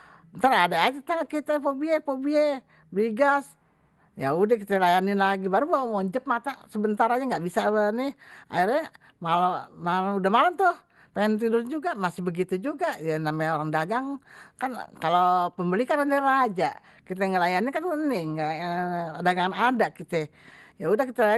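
Nothing's technically wrong with this speech clip: it came through a WebRTC call path with Opus coding, and the band topping out around 12 kHz is just what that codec setting does, not a problem.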